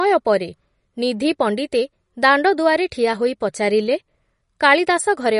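An encoder likely starved of bits, as with MP3 compression at a low rate around 40 kbps, runs throughout the speech. It removes everything above 10.6 kHz, dulling the top, while weak frequency lines flicker between frames, giving plainly audible watery swirl and smeared consonant attacks.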